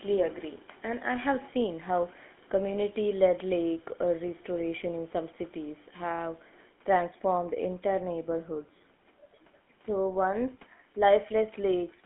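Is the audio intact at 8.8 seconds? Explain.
No. At 8.8 s, as throughout, the sound carries GSM full-rate codec damage, consistent with a 13 kbps GSM stream: the vocal tract is modelled and driven by sparse regular pulses, and the band is confined to 200 Hz–3.4 kHz. The result is a plainly audible buzzy, gravelly roughness.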